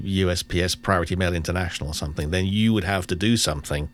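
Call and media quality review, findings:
Wireless microphone noise hit, 2.19 to 2.24 s, just before "then you would". Short swish of static over the speech, about 50 ms. Probable component: analogue FM radio link between the microphone transmitter and the receiver. Mechanism: reflected paths briefly cancel the carrier, so receiver noise rises and covers the signal. Distinguishing trait: the speech is masked by added hiss, not cut to silence or smeared, which sets it apart from a network packet-loss dropout or a codec concealment artefact.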